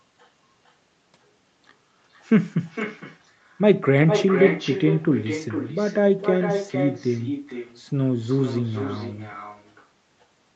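From start to finish, the speech carries an echo with no canceller. The far end plays the call through a loudspeaker. Its microphone picks that sound up and sends it back, and nothing removes it. Each phrase returns roughly half a second later, about 8 dB quieter. The copy sounds thin, like a trailing shadow. Speech and echo both stop at 8 kHz, the limit of the call path.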